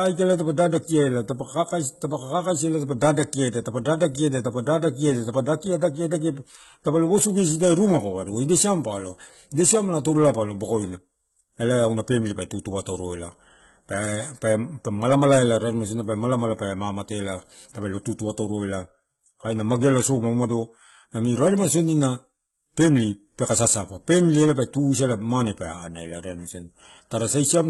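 From start to finish the speech carries heavy damage consistent with HE-AAC compression, likely at a very low bitrate in the region of 16 kbps. The lower spectrum is coded directly, while the treble is rebuilt by copying lower bands upward under a coarse envelope, so upper harmonics fail to align with the real ones. Sibilants come out gritty and lispy, a metallic sheen rides on the top end, and nothing survives above 11.8 kHz.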